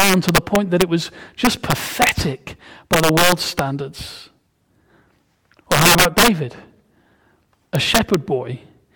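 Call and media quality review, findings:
Gain/sum stage wrapping past integer max instead of saturating: integer overflow. Loud speech peaks flip to opposite sign, violent cracks far harsher than clipping, at 0.00–0.82 s, 1.45–2.09 s, 2.93–3.59 s, 5.72–6.28 s, 7.75–8.14 s; overdrive about 3 to 10 dB.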